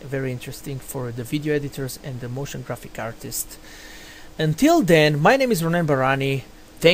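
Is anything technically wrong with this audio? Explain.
No, nothing technically wrong here.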